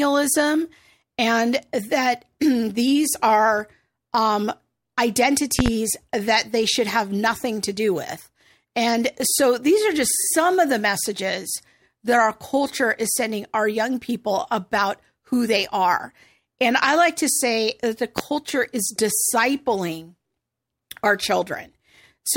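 At 5.59 to 5.70 s, a loud pop lands as two quick hits, well above the speech. At 18.18 to 18.22 s, a single, even louder pop follows. Each is likely a sudden voltage step added to the signal. The speech continues underneath.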